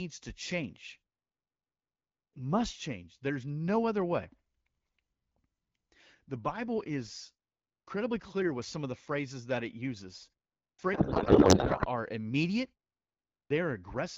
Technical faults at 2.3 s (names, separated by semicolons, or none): clipped start after a pause